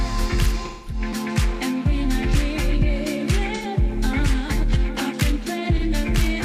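A smeared, noisy patch blurs the sound from 0.65 to 1.01 s, with shorter phasey smudges at 3.55–3.65 s and 5.77–5.84 s. This is AAC frame loss with concealment: about 213, 85 and 43 ms of coded audio went missing, which fits five, two and one lost frames. The decoder filled each gap by reusing the last good spectrum with scrambled signs or interpolated energy, so the gaps are covered but sound blurred.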